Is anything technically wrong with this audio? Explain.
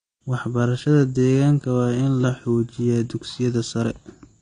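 Yes. Throughout the speech there is plainly audible damage consistent with AAC compression, likely from a low-bitrate AAC-LC encode around 32 kbps. Nothing survives above about 9.8 kHz, so sibilants sound dull, and the remaining band has a warbling, fizzy texture where the encoder starved detail and patched bands. A plain low-pass filter would also remove the top end, but it would leave the lower spectrum clean. The swirling smear is what points to a codec.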